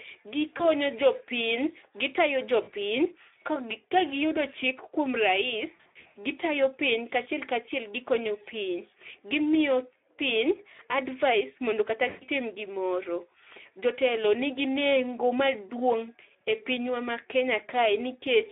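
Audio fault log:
throughout, Speex codec: The speech is confined to a telephone band of about 300 Hz to 3.6 kHz and has a plainly hoarse, noisy grain. Too few bits describe the excitation, and the coarseness fits a Speex setting near 11 kbps. Simple band-limiting would leave the sound thin but clean. Here the roughness rides on the speech itself and shifts with it, as low-rate CELP coding does.
0.57–0.63, 2.63–2.71, 5.75–6.17, 12.09–12.27, VoIP packet loss concealed by the speech codec: Short stretches turn into a fading smear just before "ne jopiny gitayo", right after "ne jopiny gitayo", and after "mondo kata". The 20 ms, 40 ms and 120 ms gaps are filled by the decoder extrapolating from its last pitch and filter. At 5.75–6.17, about 300 ms of losses are scattered over 400 ms, with the longest run 80 ms, so the sound repeatedly thins and recovers. Dropouts would give silence, and these gaps instead hold filler that decays.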